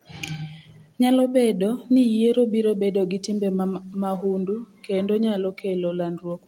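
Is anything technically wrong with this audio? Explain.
No, nothing technically wrong.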